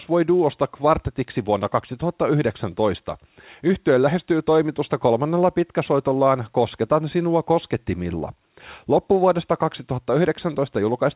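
No technical faults can be heard anywhere in this speech. It comes over a G.711 telephone path, with nothing above 4 kHz and a faint hiss that rises and falls with the level, which fits 8-bit A-law coding at an 8 kHz sample rate.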